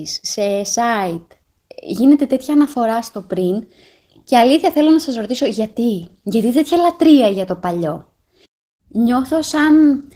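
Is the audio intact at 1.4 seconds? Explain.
No. Opus voice compression runs throughout, including 1.4 s. The hybrid coding, consistent with roughly 16 kbps, leaves speech hoarse and slightly robotic.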